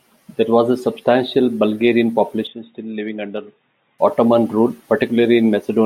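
From 2.47 to 3.99 s the speech turns dull and drops about 10 dB, with a faint new hiss far beneath it; the input was likely switched to a poorer device. A spectrogram shows everything above 3.8 kHz abruptly emptied, with no gap at either switch.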